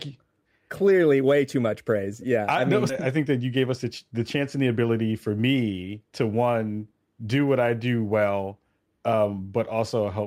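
Sample clock jitter runs throughout: the unstable converter clock adds a fine hiss, about 35 dB below the speech, that shows as a faint broadband haze thickest under loud, bright sounds.

At 2.89 s a skip ahead jumps forward with no gap, dropping about a second of speech; the waveform joins the two sides almost seamlessly, with an abrupt spectral discontinuity.

From 2.99 to 4.84 s a jitter buffer speed-up trims short pitch-period pieces, roughly 150 ms in total, so speech runs at 107% and sounds hurried, with slightly compressed spectrogram timing.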